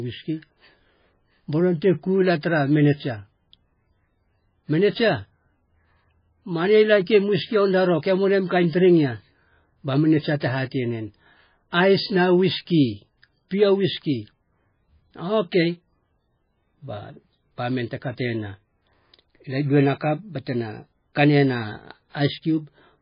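Speech runs throughout with heavy damage consistent with MP3 compression, and this is the likely cause. Nothing is present above 5 kHz, where the encoder has cut the treble to save bits, so sibilants sound dull and clipped. Weak frequency lines switch on and off between frames, which gives the whole recording a watery, swirling texture with metallic chirps on s sounds and smeared consonant onsets. That degree of damage fits a very low bitrate of around 16 kbps.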